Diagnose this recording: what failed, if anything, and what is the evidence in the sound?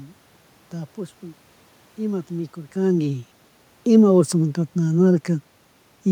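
Nothing in the chain failed.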